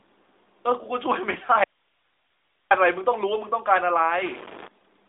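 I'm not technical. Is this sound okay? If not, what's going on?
No. From about 4.18 to 4.68 seconds, a stuck bit is the likely cause: one bit in the digital values seems frozen, so many samples come out wrong. The speech briefly picks up grainy noise or buzzy distortion over the phone-narrow sound.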